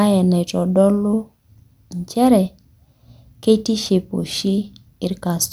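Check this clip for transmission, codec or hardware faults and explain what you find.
Nothing stood out on listening to this speech clip.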